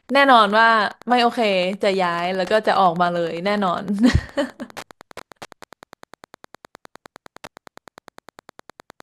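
Wi-Fi interference runs under the speech from start to finish. A nearby Wi-Fi radio is picked up and rectified by the audio circuit. Its beacon repeats every 102.4 ms. That gives a steady ticking about ten times a second, well below the speech.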